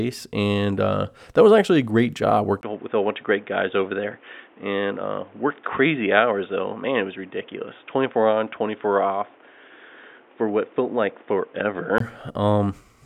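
At 2.61 s the speech drops out for about 20 ms, then turns dull and boxy with nothing above 3.7 kHz and a new noise floor well below it, at roughly the same level. It clears up at 12.00 s. That's likely the input switched to a poorer device partway through.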